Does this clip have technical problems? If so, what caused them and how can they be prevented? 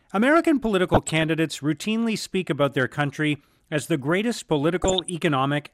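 Yes. The speech suffers DAB burbling twice, from 0.85 to 1.28 s and from 4.80 to 5.10 s: weak reception let bit error rates of around 0.4 and 0.5 percent slip past error correction, corrupting MP2 audio data so individual sub-bands carry short blips of noise. Unlike packet-loss dropouts, the sound never falls silent; it keeps going under burbling blips of noise. Better antenna placement or a stronger multiplex signal prevents it.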